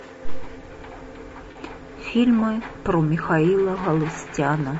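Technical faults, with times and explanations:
Throughout: low-delay AAC compression. The speech sounds rough and grainy, with a hiss filling the gaps between the pitch harmonics and a thin, synthetic-sounding top band. The likely cause is AAC-ELD, the low-delay coder used for video calls. Its short frames cannot separate closely spaced harmonics well, so each frame needs more bits to sound clean. The damage is plainly audible and fits a bitrate of around 32 kbps.
1.51 to 1.57 s: AAC frame loss with concealment. For about 40 ms the speech turns into a brief smeared, noisy patch, and then normal sound resumes. The gap points to two lost frames. The decoder had no data for them, so it rebuilt the missing stretch from the last good spectrum with randomised detail. That produces a rough stand-in instead of the real signal. The gap was short, so the sound never faded toward silence.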